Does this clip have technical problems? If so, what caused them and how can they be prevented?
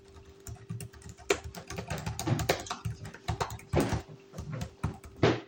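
No, the signal holds steady throughout, with no dropouts, interruptions, level jumps or added noise anywhere in these sounds, so there is nothing here that needs preventing.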